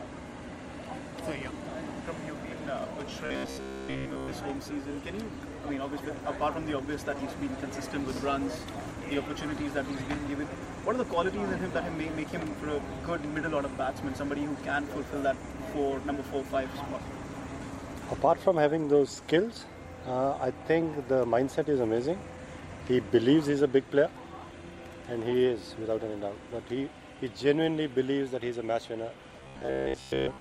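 Twice the audio collapses into a rigid, metallic buzz pinned at about 66.7 Hz, from 3.26 to 4.31 s and again from 29.40 to 30.41 s, with the underlying sound only loosely traceable through it. This is robotic sound from repeated short buffers, likely caused by audio arriving too slowly, so a 15 ms slice is looped over and over in place of most of the real signal, which imposes that fixed buzz pitch.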